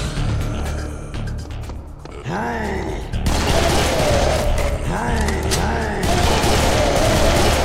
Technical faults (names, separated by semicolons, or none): none